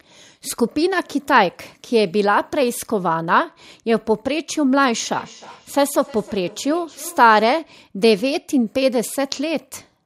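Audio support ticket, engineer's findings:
Feedback echo between two devices, 5.11 to 7.55 s. Speech returns at a steady interval of roughly 300 ms, each repeat thinner and more ringing. Peak level about 23 dB below the speech. Repeats decay rather than build. Probable component: a second device on the same call in the same room. Its speaker output reaches the first microphone and loops back. Neither echo canceller can remove the other device's playback.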